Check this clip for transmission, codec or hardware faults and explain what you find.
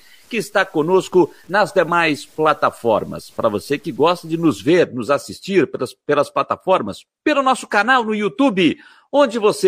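One fault is present, low bit depth without dither, from 0.0 to 4.69 s, ending just before "nos assistir pelas pelas". The speech sounds grainy and gritty, with distortion that tracks the signal and sits roughly 40 dB below it. The likely cause is truncation to about 8 bits without dither, so the rounding error follows the waveform instead of forming a steady hiss.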